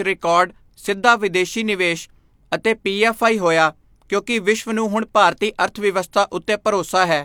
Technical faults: none

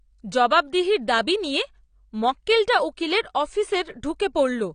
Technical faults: AAC compression

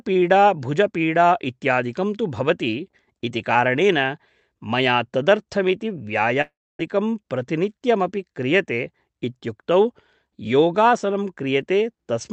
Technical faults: long network dropout

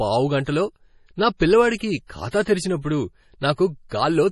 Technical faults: MP3 compression

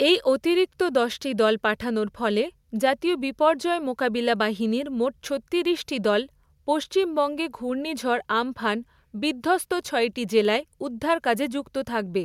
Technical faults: none

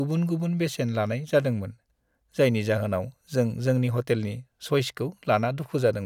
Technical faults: none

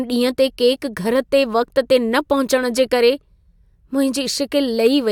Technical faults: none

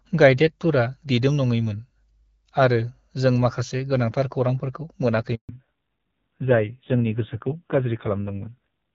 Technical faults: handover gap; fallback to narrowband

